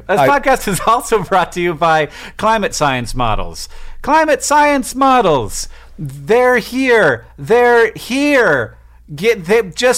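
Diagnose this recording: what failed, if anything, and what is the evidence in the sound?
Hard clipping runs through the whole speech recording, with the signal driven roughly 6 dB past the ceiling of a converter or a fixed-point format conversion. About 2 percent of samples hit that limit, so the damage sits on the louder syllables as a brittle crackle. On a waveform those peaks are squared off flat. A spectrogram shows vertical smears of harmonics reaching high into the kHz range at each clipped peak.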